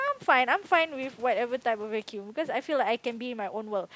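Nothing goes wrong here: the speech has just the usual call microphone processing, with nothing above about 8 kHz, and a little room noise sitting around 36 dB below it.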